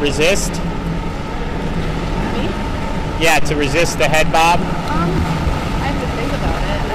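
No technical faults can be heard anywhere in the audio, and the signal holds steady throughout with no interruptions, dropouts or disturbances.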